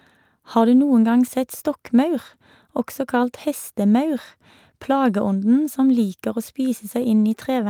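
No technical faults can be heard anywhere in this recording.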